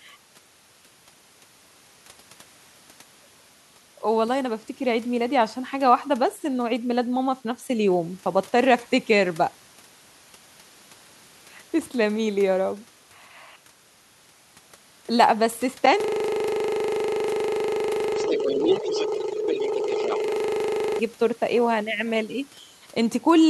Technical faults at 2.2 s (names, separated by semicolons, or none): none